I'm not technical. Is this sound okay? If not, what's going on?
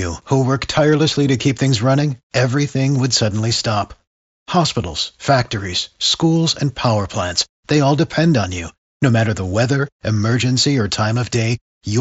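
Yes, nothing in this speech recording is going wrong. It sounds like it came through a Bluetooth headset, so the highest sounds are trimmed off and louder moments have a faint graininess, which is simply how that kind of connection carries a voice.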